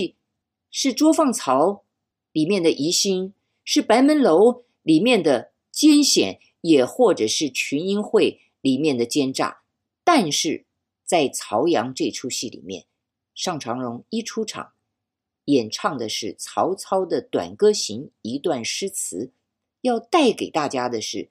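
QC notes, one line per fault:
No faults found in this speech.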